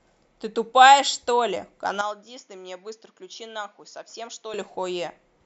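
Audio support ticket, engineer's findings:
Speech goes dull and boxy 2.01–4.54 s, then clears. Input likely switched to a poorer, narrower-band device. Spectrogram: nothing above 7 kHz in that span, with its own noise floor roughly 40 dB below signal. Waveform: about 10 dB quieter, no gap at switch.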